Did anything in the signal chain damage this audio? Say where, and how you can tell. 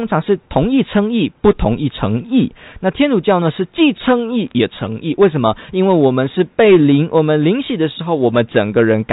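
Yes. A brief burst of sharp ticks and crackle sits on the speech from 4.48 to 4.51 s. These are bit errors on a digital phone line. Flipped bits in the G.711 A-law stream corrupt single samples, and sign or high-order hits jump the waveform. This fits an error rate well under one percent, with the 4 kHz telephone band intact around it.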